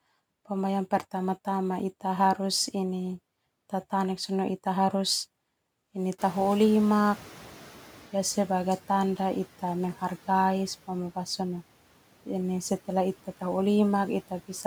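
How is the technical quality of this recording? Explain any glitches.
The recording has one glitch: a noise suppressor catching up after the background noise jumps.

From 6.18 s to 8.18 s, a burst of background noise comes through louder than it should, then gradually sinks back over those two seconds. Around 6 s the room noise rises by about 22 dB, ending up about 23 dB below the speech. The suppressor's noise estimate lags behind that jump, so at first it removes too little. As the estimate adapts over 2 s, the reduction deepens by about 6 dB and the noise settles down.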